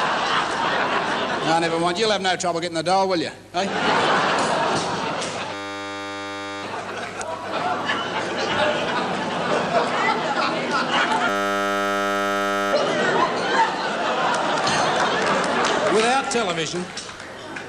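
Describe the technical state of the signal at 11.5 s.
At 11.5 s the signal is caught in a system hang loop running from 11.29 to 12.73 s. The playback path stalled while the output hardware kept replaying its ring buffer, so a single 10 ms slice of audio repeats about 144 times. Such a short loop fuses into a steady 100 Hz buzz rather than a stutter, which points to a buffer of roughly that length. Little or no audio appears to be lost around the loop.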